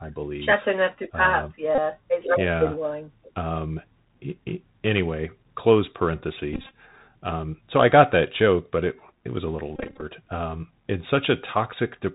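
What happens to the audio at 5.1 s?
At 5.1 s the speech is passing through a Bluetooth CVSD headset codec, as it does for the whole clip. The encoder sends one bit per sample, a consistent 64 kbps stream, saying only whether the waveform should step up or down, with an adaptive step size. Nothing above about 4 kHz survives, so the speech sounds narrow and boxy. Fast, loud high-frequency energy outruns the step, leaving s sounds scratchy over a grainy hiss.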